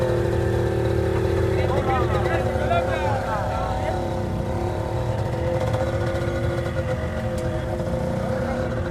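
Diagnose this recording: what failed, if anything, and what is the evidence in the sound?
No failure can be heard in this recording of everyday sounds. Nothing in the audio points to a problem at any stage of the chain, from the analogue side through to playback.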